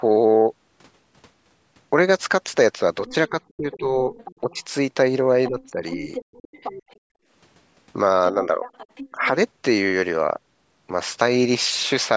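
From 3.07 to 4.55 s a faint second voice, about 20 dB under the talker, comes through. This is likely the other side's voice leaking through past the echo canceller. From 3.08 to 4.63 s the talker dips by up to about 15 dB in pieces. That is likely speech suppressed in double talk, with the canceller turning down both voices at once. From 5.46 to 6.96 s the other side leaks again, louder, about 10 dB down, likely from the same leftover echo. From 5.49 to 6.1 s the talker dips by about 10 dB, likely the same double-talk suppression. From 6.48 to 7.28 s the room sound drops by up to about 39 dB for roughly half a second. This is background gated by the echo canceller while the loudspeaker plays. From 8.32 to 9.35 s the talker dips by about 10 dB, likely suppressed in double talk. From 8.65 to 9.28 s the other side leaks through faintly, about 20 dB down, likely as residual echo.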